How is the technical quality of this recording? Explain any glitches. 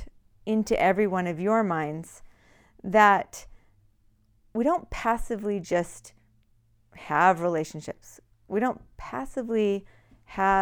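The recording has no glitches to explain. Nothing in this speech clip calls for a technical explanation at any point.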